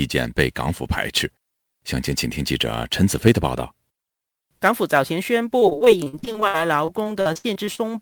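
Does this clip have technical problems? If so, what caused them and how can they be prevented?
Yes. Sample clock jitter runs through the whole speech clip as a fine hiss and roughness that grows on loud and bright sounds and disappears in the pauses. The converter's clock wanders by a few microseconds, so each sample is taken slightly early or late. The resulting error scales with how fast the waveform is changing, landing roughly 25 dB below the signal. It can be prevented by using a converter with a clean, stable clock or locking it to a low-jitter reference.

Repeated packet loss (robotic sound) sets in from 5.59 to 7.80 s, where the audio turns choppy. Packets kept going missing or arriving late, leaving nearly twenty gaps in that stretch, the longest lasting 66 ms. Each hole was patched by extending the last bit of sound, so about a quarter of the span is filled-in sound rather than real signal, with pieces still dropping out between the patches. 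It can be prevented by running the call over a steadier network with a larger jitter buffer and forward error correction enabled.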